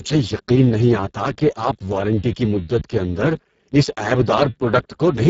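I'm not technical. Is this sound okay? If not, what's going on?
No. From start to finish the speech has been squeezed through the Speex codec, an old voice-chat compression scheme, at one of its lowest quality settings. So little detail survives that the voice sounds hoarse and grainy. The crisp upper sounds, such as s and t, are mostly replaced by a rough hiss that imitates them, and nothing at all is carried above about 7.6 kHz, so the sound is muffled as well as rough.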